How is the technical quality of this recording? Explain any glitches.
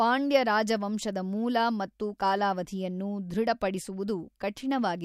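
Nothing in this recording stands out as a glitch, so there's really nothing to flag here.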